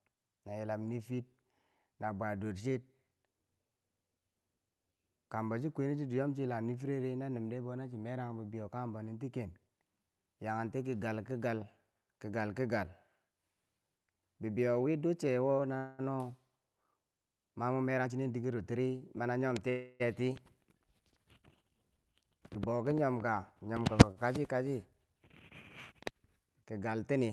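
Speech running over a call path, with the top end rolling off around 12 kHz and coding noise that fits an Opus-style codec, and a few jitter-buffer hiccups along the way. There are two call audio freezes, at 15.77 to 16.01 s and 19.70 to 20.02 s. In each the last sound gets drawn out into a fading buzz or hiss for about 0.21 s and then 0.30 s before the talker picks up exactly where they left off. Nothing is lost, just delayed, which is most likely packets stalling in transit and the jitter buffer running dry. About two seconds after each one you get a jitter buffer speed-up, at 17.82 to 19.39 s and 21.98 to 22.84 s. The receiver is clipping out tiny pitch-period slices to burn off the backlog, roughly a fifth of a second the first time and a tenth the second. So the speech plays at 113% and then 109% of normal speed with the pitch unchanged, and it comes across as a bit rushed. Finally there's a short stall from a late packet at 24.11 s. 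One packet wasn't there in time, so the buffer stretched the current sound by about 53 ms until it showed up. You hear a sound held slightly too long with a faint buzzy dip, but the speech resumes from the same spot with nothing missing.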